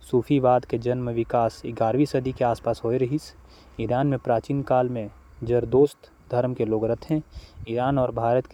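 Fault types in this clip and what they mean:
No fault types are present in the clip.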